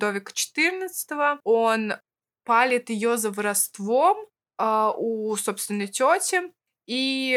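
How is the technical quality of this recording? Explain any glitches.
Nothing in the recording stood out as a technical problem on listening.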